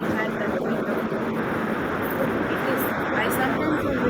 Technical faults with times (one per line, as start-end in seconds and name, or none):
0.00-0.04 speech suppressed in double talk